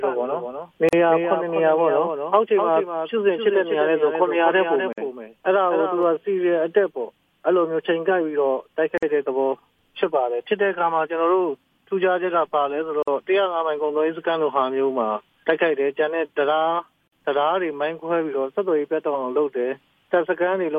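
A second copy of the audio runs about 5 dB under the original, roughly 300 ms behind, from the very start until it cuts off abruptly at 6.03 s. This doubled audio track is full-band with no decay or room colour, unlike an echo or reverb, and likely comes from a second, slower capture path being mixed in. Short silences also open at 0.89 s (about 40 ms), then at 4.93, 8.98, 13.03 and 17.08 s (about 49 ms each), exactly every 4 s. These are gaps at joins of encoded pieces, where encoder delay and end-frame padding were left in. Unlike dropouts, nothing is lost, and the sound resumes from where it stopped.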